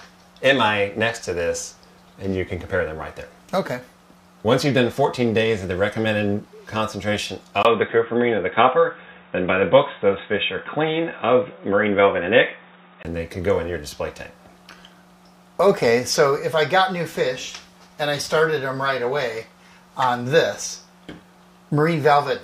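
From 7.63 to 13.05 s the sound turns dull and boxy, likely an input switched to a poorer device; a spectrogram shows nothing above 3.8 kHz, a waveform a brief gap.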